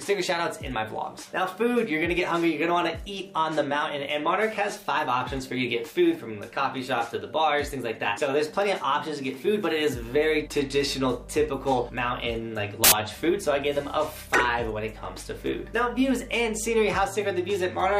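A burst of loud, harsh broadband noise fills 12.84 to 12.92 s: samples built from the wrong bytes, with misassembled bytes turning rapidly changing low bits into the large part of each value.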